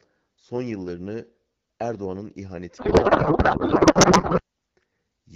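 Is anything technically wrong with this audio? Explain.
Yes. From 2.77 to 4.42 s there is a codec payload misread. The AMR wideband stream at 12.65 kbit/s carries the speech clearly up to that point, but the decoder then unpacks each frame with its fields shifted, which fits octet-aligned AMR being read as bandwidth-efficient. The speech gives way to garbled noise and warble that barely tracks it. On a spectrogram the harmonic striations dissolve into smeared, patchy energy, and the waveform envelope stops following the syllables.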